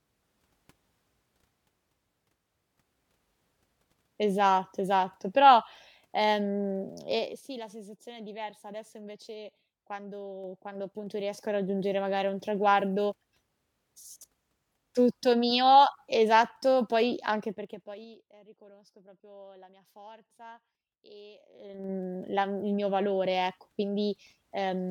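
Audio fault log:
7.08–7.44 s, 10.28–11.84 s, 17.4–18.2 s, 21.52–21.92 s, zipper noise: the level moves in unsmoothed 3 dB steps, down about 15 dB, up about 15 dB, down about 25 dB, then up about 25 dB. Each step clicks, giving a ticking that shows as a staircase envelope on the waveform and thin vertical lines on a spectrogram.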